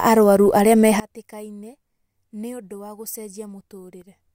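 A speech clip that collapses at 1.0 s, just after "arũaru arĩa": from there to the end at 4.3 s the centred speech drops by about 23 dB, leaving a faint remnant. The likely cause is one channel inverted, so the shared mono content cancels when the channels are summed.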